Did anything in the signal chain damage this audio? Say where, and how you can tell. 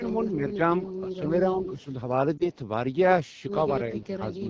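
Yes, several stages left marks. First, the codec: this is AMR wideband (HD Voice) running at 8.85 kbit/s, one of its lowest rates, and the damage is plainly audible all the way through. At that rate the pulse-driven model of the vocal tract can't capture the excitation properly, so the speech comes out rough and raspy. The top band above 6.4 kHz is just shaped noise filling in.

On the network or radio side there's a lost AMR speech frame around 2.37 to 2.50 s. Only one 20 ms frame went missing, but you hear a brief dip or warble. The decoder concealed the gap by reusing the last good pitch and vocal tract settings at reduced gain, and the voice comes back weak or rough for a moment while it recovers.

From 3.91 s to the end there's call-processing damage that's likely speech suppressed in double talk. The voice gets pushed down in patches totalling roughly 300 ms, with the deepest drop around 15 dB. 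That pattern fits an echo canceller that couldn't tell its talker from loudspeaker echo while both sides were active, so it turned everything down.

Overlapping that, from 3.92 to 4.08 s, there's a faint delayed copy of the voice, likely an echo leak. It sits about 30 dB below the speech and lags by 341 ms. A loudspeaker on one side fed the voice back into its microphone, and the echo canceller there didn't remove all of it. What slipped through returned as a quiet ghost of what had just been said.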